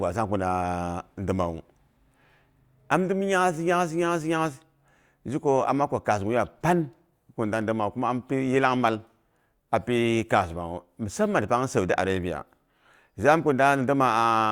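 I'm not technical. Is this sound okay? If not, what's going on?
Yes, this sound is okay, and there's nothing going on that needs fixing.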